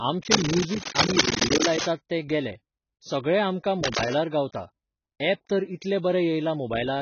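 Speech, heavily band-limited throughout, with nothing above 6.6 kHz and a dull, smeared texture; this likely comes from AAC compression at a bitrate that points to about 16 kbps, and the spectrogram shows a flat ceiling with patchy, holed bands below it. Cable scratch noise, likely from a worn cable or connector being moved, appears from 0.31 to 1.90 s, about as loud as the speech, just before "तें गेलें सगळें आमकां". It returns, somewhat quieter, from 3.84 to 4.14 s, right after those words. In the waveform both bursts show as dense, ragged spikes, and in the spectrogram as broadband vertical smears.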